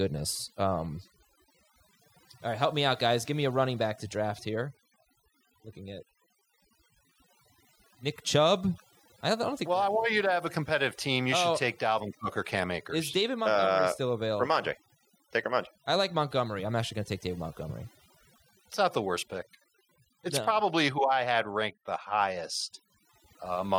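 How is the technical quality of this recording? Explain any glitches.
The main problem here is overdone noise removal, and it runs through the whole recording. A noise reducer was pushed too hard, so any frequency band sitting close to its idea of the noise floor gets pulled way down or switched off, and the softer parts of the speech get caught in that too. You hear it as a background that drops away and breaks up into little twinkling, warbling specks.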